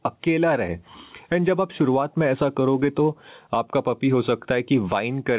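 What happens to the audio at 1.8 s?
At 1.8 s the clip is in the middle of gain pumping, which runs through the whole recording. The likely cause is input gain set far too high, with a fast limiter clamping down on every loud syllable. The gain swings by roughly 15 dB, so loud and quiet parts sit squashed together. All of this is heard through telephone-band audio with nothing above 4 kHz.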